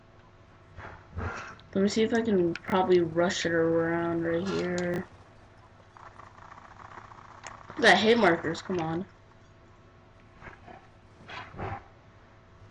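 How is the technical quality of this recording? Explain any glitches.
Two brief glitches are audible, both chunks out of order, at 2.68 to 2.72 s and at 4.94 to 4.98 s. In each, a 20 ms chunk arrived or was written one chunk late and plays after the chunk that should follow it, so two neighbouring 20 ms segments are swapped. Nothing is missing, but the sound briefly jumps forward, then back, then resumes. The reordering creates three hard joins per event, which is heard as a short jumbled moment.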